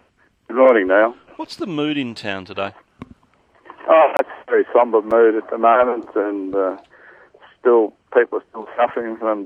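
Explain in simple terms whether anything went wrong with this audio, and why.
Twice, the system dropped a short chunk of audio and put pure digital silence in its place. These blocks of digital silence cut in and out abruptly, leaving a tiny hole at 4.17 to 4.19 s and a tick at 5.11 s.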